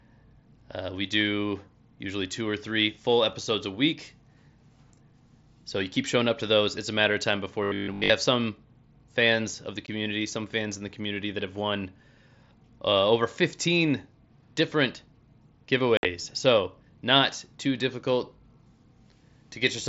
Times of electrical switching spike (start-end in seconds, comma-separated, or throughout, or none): none